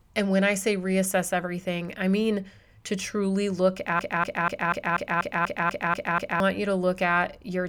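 A speech recording, and it hits a broken-record loop right after "mean to truly look": from about 3.99 s to 6.40 s, a 243 ms fragment plays back to back ten times, stuttering identically each pass. Whatever should have been said in those couple of seconds is simply gone, replaced by the repeats. The likely cause is a player, encoder or stream stalling and resending the last chunk it had buffered until it recovered.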